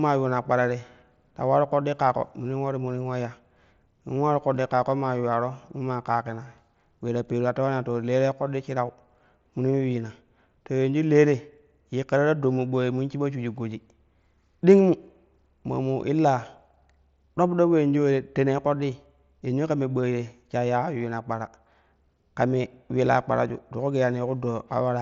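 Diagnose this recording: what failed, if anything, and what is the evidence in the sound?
Nothing stood out on listening to this speech recording; no stage of the chain shows a failure that can be heard.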